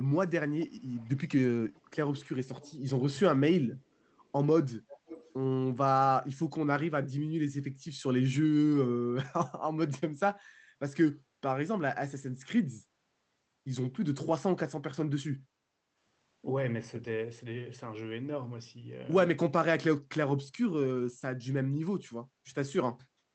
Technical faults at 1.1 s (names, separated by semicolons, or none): echo leak